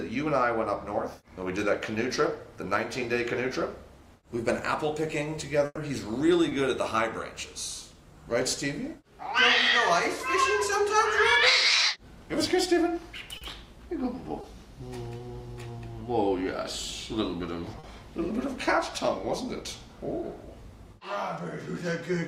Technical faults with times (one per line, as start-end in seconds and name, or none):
5.65-5.79 burst of packet loss
6.49-6.53 short concealed packet loss
13.37-13.43 short concealed packet loss
14.41-14.45 short concealed packet loss
15.17-15.21 short concealed packet loss
17.79-17.85 short concealed packet loss